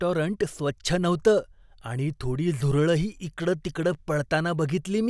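No technical faults are audible.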